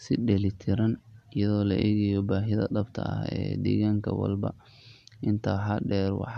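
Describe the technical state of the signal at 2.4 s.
At 2.4 s the speech signal is intact, with no audible technical fault at that point.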